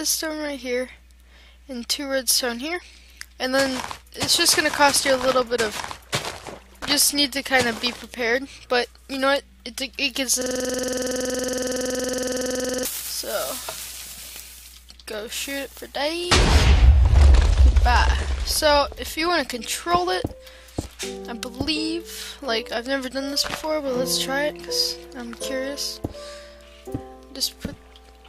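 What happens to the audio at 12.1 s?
At 12.1 s the audio is caught in a system hang loop that runs from 10.42 s to 12.85 s. The computer or driver stalled, but the sound hardware kept replaying its ring buffer. A 46.44 ms slice repeats exactly, dozens of times over, which fits a 2048-sample buffer. The loop cycles at 21.5 Hz. That rate is too slow for a smooth buzz. It comes across as a rapid, rattling, machine-gun stutter.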